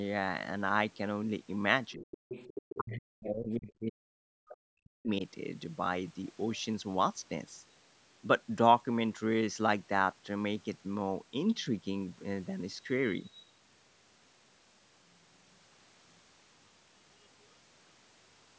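From 1.95 to 2.2 s the speech sinks by as much as about 40 dB, and it drops again across a longer stretch from 2.74 to 5.22 s, with around two seconds of that span pulled down. This is speech suppressed in double talk. The likely cause is an echo canceller that heard both ends talking at once, could not tell the talker apart from the loudspeaker echo, and turned everything down. Unlike a network dropout, the cuts follow the overlap rather than arriving as clean fixed-length gaps.

Overlapping these dips, the other side's voice leaks through, most clearly from 2.12 to 2.76 s at about 10 dB below the speech, then in brief scraps at 3.2 to 3.29 s (about 15 dB down) and 4.49 to 4.54 s (about 20 dB down). This is likely residual echo that the canceller failed to remove.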